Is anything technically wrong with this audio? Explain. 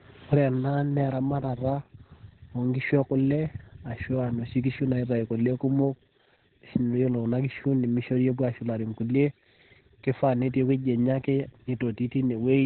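Yes. Heavy Opus voice compression runs through the whole speech clip. Nothing is present above about 4.2 kHz, which fits SILK in narrowband mode at a very low bitrate, near 8 kbps. With coarsely coded excitation, the speech sounds muffled, hoarse and slightly robotic.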